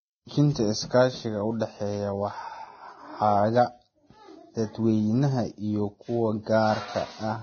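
Heavy codec damage runs through the whole speech recording. Nothing is left above 6.5 kHz, so the top end sounds dull and closed off. What treble remains is hissy and grainy. Tones take on a coarse edge. The likely cause is Vorbis compression at a very low bitrate, around 17 kbps. At that rate the encoder keeps only a smooth spectral outline and coarsely quantised detail. The fine structure is replaced by noise of similar energy.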